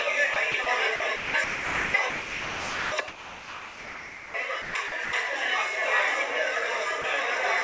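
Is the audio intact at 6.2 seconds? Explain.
Yes, the audio is intact at 6.2 seconds, with nothing there beyond the ordinary character of a call codec path whose content stops at about 8 kHz.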